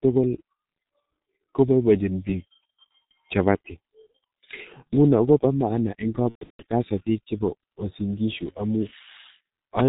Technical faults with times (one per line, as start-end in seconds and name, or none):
0.00-9.89 G.723.1 codec
6.29-6.63 VoIP packet loss concealed by the speech codec